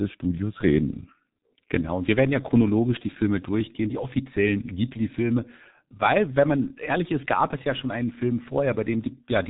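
From start to finish, the speech carries heavy G.723.1 codec damage. The sound is squeezed through a very low-rate telephony coder, and the result fits roughly 6.3 kbit/s. Nothing reaches above 3.8 kHz, so the top end is simply gone. The speech sounds muffled and hoarse. The coder's voice model updates only in coarse 30 ms steps, so fast transitions smear. Consonants blur together and lose their edges.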